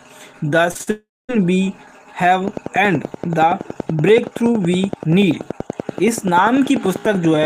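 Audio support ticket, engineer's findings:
Short concealed packet loss at 0.71 to 0.77 s, 0.77 to 0.81 s and 0.83 to 0.89 s. Three gaps of about 40, 20 and 40 ms in quick succession, bridged by the receiver's concealment, which extends the preceding sound and cross-fades back. Heard as a brief smear and wobble. Component: jitter buffer and decoder concealment on the receive side, with packets arriving late or not at all.

Long network dropout, 0.91 to 1.31 s. Directly follows the short losses. About 380 ms never arrived. Concealment stretches the last sound into a fading buzz or hiss, leaving roughly 230 ms of near-silence before audio resumes further on, with that stretch missing. Likely cause: a burst outage on the network path.

Train of clicks, 2.48 s to the end of the clip. Regular ticking at 10.5 clicks per second, same shape each time, peaking around 10 dB above the signal and audible in pauses as well as over the sound. 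Likely cause: electrical interference from nearby equipment or a faulty connection or power supply injecting a periodic pulse.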